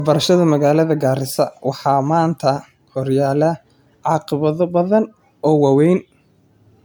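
From start to finish the speech has a swirly, smeared quality, with a hollow, watery tone and soft, blurred consonant attacks. It sounds worse than a single 128 kbit/s MP3 would. This is generation loss, most likely from the audio being decoded and re-encoded as MP3 around seven times. Each pass quantises the signal again on a shifted frame grid, so the noise and spectral gaps stack up. The top end still reaches about 20.1 kHz.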